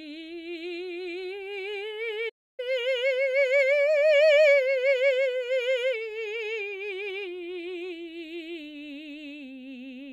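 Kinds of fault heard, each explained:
Playback stall: the music drops to silence for 0.29 s at 2.29 s, then resumes, likely because the player ran short of data.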